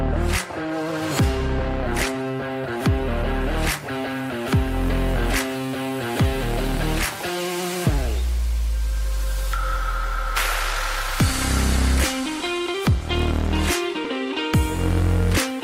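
At 14.04 s a single lost LE Audio frame, about 7.5 ms, is covered by the LC3 decoder repeating the previous spectrum with scrambled signs. Unlike a plain dropout, there is no gap or click, only a brief noisy smear. The light lossy compression stays faint.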